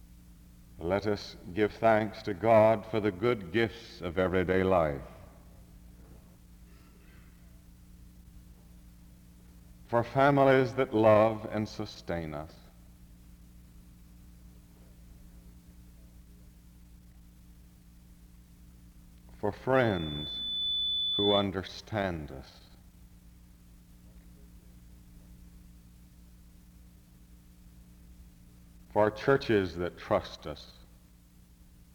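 Around 19.75 s a loudspeaker feedback squeal kicks in and runs to about 21.49 s. It's a single whistle at 3.5 kHz that swells over roughly a second until it sits about level with the rest of the audio. What's happening is the mic is hearing the speaker it feeds, and at that one pitch the loop gain tips over one, so the tone keeps feeding itself until the loop gets broken and it drops out.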